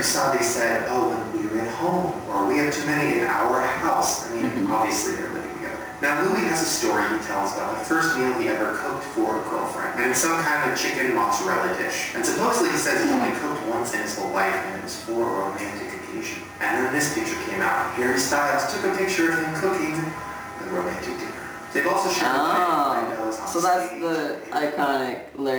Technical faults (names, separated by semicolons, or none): gain pumping; sample clock jitter